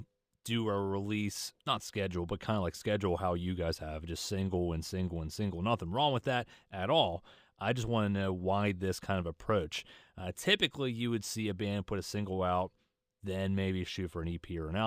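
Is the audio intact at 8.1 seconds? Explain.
No. Throughout, including 8.1 s, sibilants carry a faint metallic shimmer from mirror images roughly 30 dB down at 11 to 22 kHz. This is imaging from linear upsampling, consistent with a 22 kHz rate raised to 48 kHz by straight-line interpolation.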